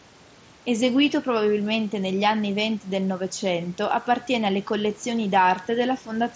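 No technical faults are audible in this speech.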